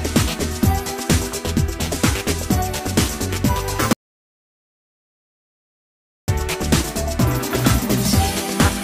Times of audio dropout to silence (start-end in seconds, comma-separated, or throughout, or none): 3.93-6.28